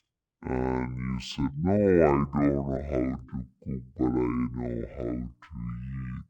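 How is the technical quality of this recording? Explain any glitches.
The technical quality is poor because of one fault that runs through the whole clip. Stereo read as mono, throughout: interleaved left and right samples play back-to-back as one channel, so the speech runs at half speed, an octave low, with a faint mirrored image higher up.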